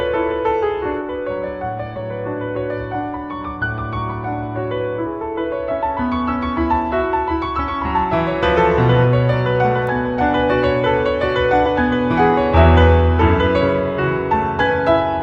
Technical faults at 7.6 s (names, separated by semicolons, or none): none